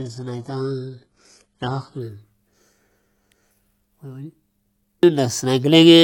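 From 0.0 to 2.0 s, an adaptive stream starting at a low bitrate: the player began on a thin version, sounding like roughly 12 kbit/s HE-AAC, before moving up to something near 96 kbit/s AAC-LC. Until then the speech has dull, partly synthetic treble and heavier codec artefacts, and nothing reaches above 11.5 kHz. At 2.0 s the quality jumps up abruptly, with no gap.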